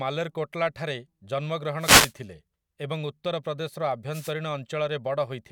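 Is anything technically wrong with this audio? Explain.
Yes. Wireless microphone noise hits at 1.79–2.13 s and 4.11–4.33 s: FM signal fades produce brief static swishes, visible as broadband vertical noise bands.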